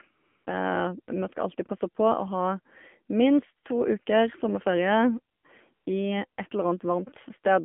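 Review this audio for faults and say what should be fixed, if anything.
The speech has a buzzy, synthetic edge, with a hollow, boxed-in sound and nothing above 3.4 kHz or below 200 Hz. This is the AMR narrowband mobile codec at work. The audio passed through an 8 kHz telephone path whose encoder models the voice as a vocal-tract filter driven by sparse pulses. The plainly audible damage fits a low mode such as 7.4 kbps. Prevention: carry the call over a wideband codec such as AMR-WB or EVS, or at a higher AMR mode.

Three times the background is swapped for a smooth, steady hiss that switches in and out abruptly, at 0.14 to 0.46 s (320 ms), 5.36 to 5.44 s (80 ms) and 5.74 to 5.86 s (120 ms). This is AMR comfort noise. The sending phone judged these moments silent and stopped sending speech frames, and the receiver filled each gap with synthetic noise built from a rough level and spectrum. 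Prevention: disable discontinuous transmission or make its voice-activity detection less aggressive so pauses keep real frames.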